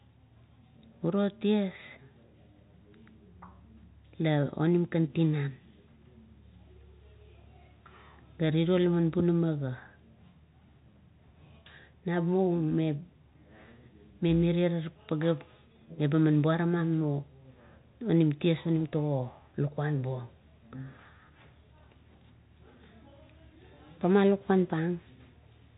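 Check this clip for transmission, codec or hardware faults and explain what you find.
No transmission, codec or hardware faults can be heard in this speech clip. It has passed through G.711 telephone coding in its mu-law form, so the sound is band-limited with nothing above about 3.8 kHz, and any quantisation noise from the format is faint at most.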